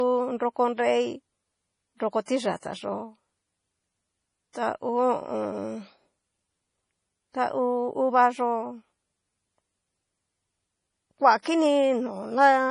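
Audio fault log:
throughout, low-bitrate audio saved at a high bitrate: the speech was likely first squeezed through a low-bitrate MP3 encode, then written out again as a high-bitrate MP3. The larger second file cannot bring back what the first pass discarded, so nothing sounds above about 10.5 kHz, which fits a 32 kbit/s first encode. The speech keeps that dull, band-limited top and the smeared coding artefacts of the earlier stage, with the re-encode adding almost nothing.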